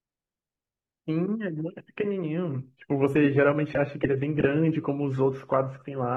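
A speech clip on an adaptive stream that dropped to a lower bitrate at 2.67 s, most likely because the connection slowed, and stayed there to the end. With no gap, codec artefacts abruptly rise, which fits a fall from roughly 96 to 32 kbit/s AAC.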